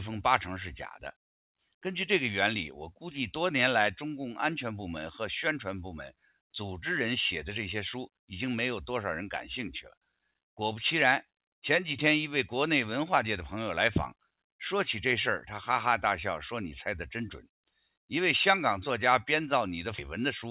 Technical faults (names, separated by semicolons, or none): sound cut by the noise suppressor